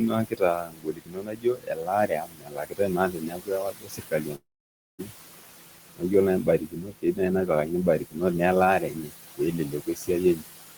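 Noise suppressor artifacts run through the whole clip. The suppressor pulls down bands it judges to be steady noise by about 17 dB, frame by frame. The room noise, which sits about 14 dB below the speech, therefore sinks in the gaps and comes back up under each word, giving a background that pumps instead of holding steady.

From 0.0 to 5.12 s the suppressor cuts speech as well. It mistakes parts of the talker's signal for noise and turns them down with the background, by up to about 19 dB. Across roughly four seconds of that stretch, softer sounds and word endings come out swallowed and faint.

Inside that span, from 4.35 to 5.01 s, the audio breaks off for about 640 ms, likely a long network dropout in which no packets reached the receiver. The gap is first filled with a continuation of the last sound that decays as a fading buzz. About 560 ms of it is then plain silence before the signal resumes, with the lost section simply gone.

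Two more stretches of speech cut by the noise suppressor follow. Just after "ore nai", from 6.44 to 8.21 s, portions totalling roughly 0.7 s drop by up to about 16 dB. From 8.79 to 10.43 s, a similar amount is pushed down by up to about 18 dB. In both, quiet consonants and phrase tails fade into the background as if gated away.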